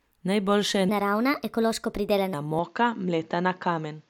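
From 0.89 to 2.34 s the speech runs at the wrong speed, about 1.24 times too fast. Because speed and pitch move together, the voice jumps up by roughly four semitones and sounds hurried and a bit chipmunky, then drops back to normal when the section ends. That points to a stretch that was likely clocked or played back at the wrong rate, whether in an edit or by the player.

Then at 2.59 s, running to the end, it sounds like the input switched to a poorer device. The change is immediate, with no gap. The top end is gone, so the voice turns duller and boxy. There's also a new, faint noise floor sitting roughly 45 dB under the speech. The loudness stays about the same, which makes the tonal shift the giveaway. The likely cause is the system swapping to a different mic or a headset's call profile mid-recording.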